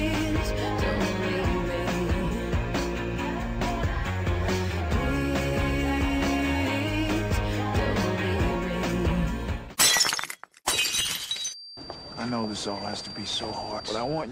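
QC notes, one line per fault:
11.36–14.31 s, feedback whistle: a thin, steady 4.7 kHz tone sits well below the sound and swells and fades slowly, likely a loudspeaker-to-microphone loop held just short of runaway.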